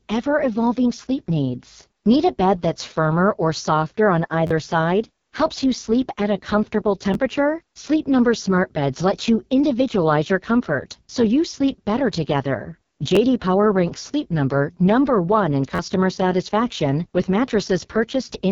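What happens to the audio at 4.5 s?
From 4.47 to 4.51 s there is a repeated buffer. New audio arrived late, so the device replayed its last block three more times. Each block lasts about 12 ms, which fits a 512-sample buffer. The result is a brief buzzy stutter with hard joins, and roughly 40 ms of real speech is lost.

The whole clip, including this moment, also carries the AMR wideband (HD Voice) codec at 6.6 kbit/s. At this lowest rate the speech sounds rough and raspy, with nothing above about 7.1 kHz.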